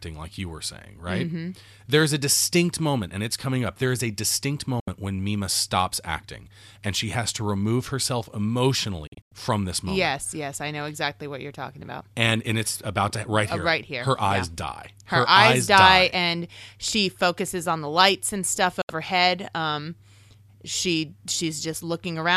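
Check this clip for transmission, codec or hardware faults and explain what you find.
Three digital broadcast dropouts interrupt the speech.

Digital broadcast dropout at 4.80–4.88 s, after "is a distinct": the receiver lost valid frames and muted, giving a 72 ms hole with a 3 ms fade. That fits three lost 24 ms frames.

Digital broadcast dropout at 9.07–9.32 s, before "from this moment": repeated frame failures leave scattered holes totalling 168 ms across 240 ms. The longest gap is 96 ms.

Digital broadcast dropout at 18.82–18.90 s, after "the lights and stuff": a brief mute of 72 ms again drops the audio to silence. The content sent during the gap is lost.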